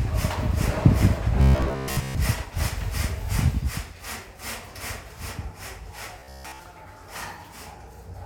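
Robotic sound from repeated short buffers at 1.41 to 2.15 s and 6.19 to 6.60 s: a rigid 66.7 Hz buzz, likely from about 15 ms segments replayed while most of the real audio was skipped.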